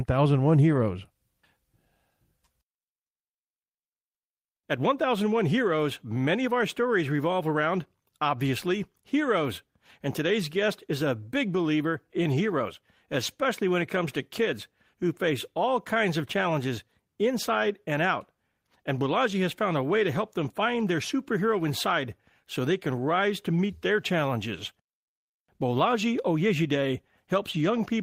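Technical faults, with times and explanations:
Nothing jumps out here; the speech just carries on without any technical trouble worth pointing to.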